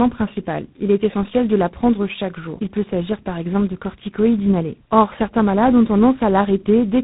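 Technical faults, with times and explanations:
throughout, tandem speech coding: The call was decoded and re-encoded by two speech codecs in a row, which fits a GSM full-rate leg followed by G.726, with each stage compounding the previous one's loss. Speech sounds rough, muffled and warbly, with nothing above 3.8 kHz.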